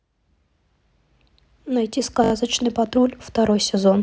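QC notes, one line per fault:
0.88–0.90 s: repeated buffer. A 20 ms piece of the speech plays once more with a hard join. Fresh audio arrived late, so the device replayed it. Nothing is skipped. It sounds like a click.
2.24–2.32 s: repeated buffer. A 20 ms piece plays four extra times in a row. The hard joins repeat every 20 ms, so it sounds like a brief buzzy stutter. Nothing is skipped.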